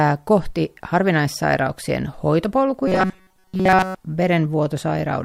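New audio likely arrived too seldom from 2.88 to 3.97 s, so the software looped a short buffer of roughly 5 ms throughout that stretch. This robotic sound from repeated short buffers turns the speech into a rigid, metallic 188 Hz buzz.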